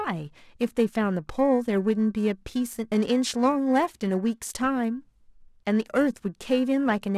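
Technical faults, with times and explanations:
Throughout, periodic clock jitter: the converter clock wobbles at around 1.5 kHz, adding sidebands beside every component, giving the speech a rough, metallic edge that disappears in pauses.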